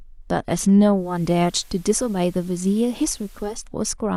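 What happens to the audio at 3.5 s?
At 3.5 s the speech is still on the analogue side of a digital radio blending to analogue, which runs from 0.91 s to 3.69 s. The receiver lost its digital stream and cross-faded over 323 ms to the station's FM broadcast, then returned to digital at the end of the span. While on FM the level sits about 2 dB lower and a steady hiss rides roughly 30 dB under the speech.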